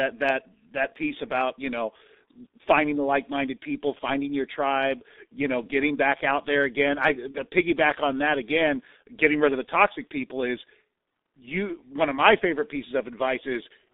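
From start to finish the speech carries the G.723.1 codec sound: a narrow line band of roughly 250 Hz to 3.7 kHz, heavy coding damage that leaves it muffled and hoarse, and consonants smeared because the voice model is refreshed only every 30 ms. That slow, coarse texture fits the 6.3 kbit/s mode. Unlike a plain telephone band-limit, the damage is more than missing treble: the grain and the blurred attacks come from very low-rate coding.

At 7.31 to 7.38 s there is VoIP packet loss concealed by the speech codec. The decoder filled the gap by repeating its last pitch and filter with falling gain, so the sound briefly stretches into a fading buzzy tone or coloured noise, and the speech stays weak or distorted just after. The concealed gap is about 70 ms, which fits one lost 30 ms frame plus recovery. A dropout would leave silence and a click would be instantaneous, but this gap is filled with a smeared, decaying continuation of the preceding sound.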